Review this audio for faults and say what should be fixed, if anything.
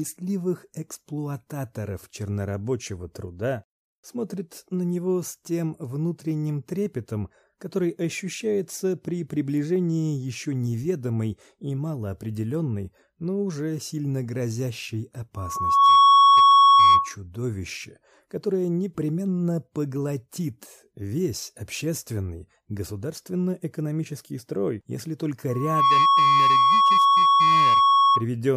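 Loudspeaker feedback squeal at 15.36–17.15 s and 25.49–28.26 s: the microphone-to-loudspeaker loop gain exceeds unity at 1.1 kHz, so a single tone swells within about half a second to roughly 15 dB, and later 10 dB, above the signal. Lower the system gain, notch 1.1 kHz, or move the microphone out of the loudspeaker's coverage.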